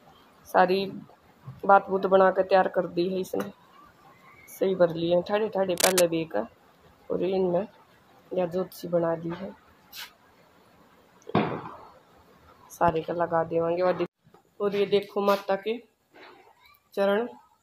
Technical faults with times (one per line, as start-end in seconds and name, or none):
5.77-6.02 cable scratch noise